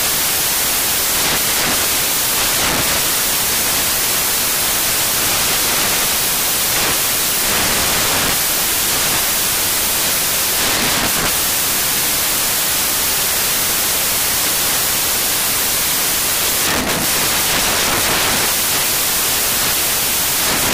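From start to finish, the samples are built from the wrong bytes: the reader assembles each sample with its bytes misaligned or in the wrong order, so the rapidly fluctuating low-order bits land in the most significant position. What should be fine detail becomes the bulk of every value, and the audio comes out as loud, harsh broadband noise, close to white on loud passages.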